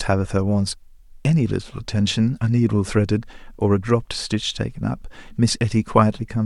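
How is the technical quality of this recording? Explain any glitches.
No glitches or technical faults are audible in this recording.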